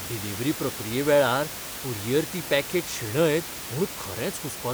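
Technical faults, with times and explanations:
No technical faults can be heard anywhere in this recording.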